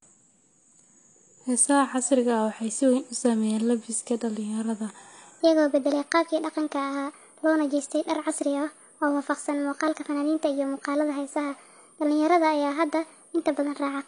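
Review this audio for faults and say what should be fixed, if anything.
The speech throughout is dull and smeared, with a fizzy, warbling edge on sibilants and nothing above 10 kHz. This plainly audible damage is likely from AAC compression (AAC-LC) at a low bitrate, which fits roughly 32 kbps: the encoder drops the top band and quantises the rest so coarsely that detail breaks up. A spectrogram would show a hard ceiling at 10 kHz and patchy, hole-ridden energy below it. Encode at a higher bitrate, or keep a lossless master for delivery.

From 5.41 s to the end, just after "u saameeyeen labiska dhalinyarada", the section runs at the wrong speed, 1.26 times too fast, so the speech turns hurried and rises about four semitones. Speed and pitch shift together, which likely comes from playing that part against the wrong clock. On a spectrogram, the harmonics and formants jump upward at 5.41 s, and the waveform's syllable envelopes bunch closer together from there on. 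Check that sample rates and playback clocks match for every segment before joining and exporting.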